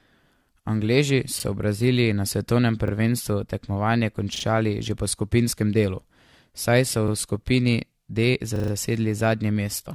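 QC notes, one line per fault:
throughout: generation loss. Swirly, hollow, smeared texture with blurred consonant attacks and no content above 14.1 kHz. This is likely from about three successive lossy encodes, consistent with AAC-LC near 64 kbit/s. Each pass re-quantises on a shifted frame grid, compounding noise and spectral holes.
1.40, 2.88, 4.36, 7.08, 8.56 s: repeated buffer. A 40 ms segment replays with a hard join at each repeat, once at 1.40, 2.88 and 7.08 s, twice at 4.36 s, and four times at 8.56 to 8.72 s. The short stutters point to a 40 ms playback buffer underrunning. No audio is skipped.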